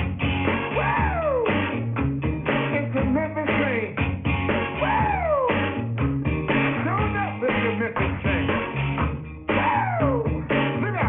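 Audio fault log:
throughout, aliasing: the audio was downsampled without an anti-aliasing filter, and the sound points to a drop from 44.1 kHz to about 6 kHz. Everything above the 3 kHz fold point reflects back down as false, unrelated tones, roughly 10 dB below the true signal, so high-frequency detail turns gritty and metallic instead of simply disappearing. The spectrum stays crowded right up to the 3 kHz band edge rather than tapering off.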